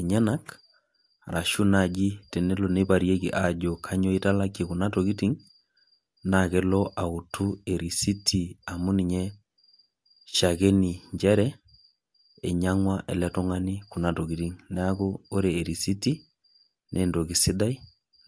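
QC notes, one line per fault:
No fault to note.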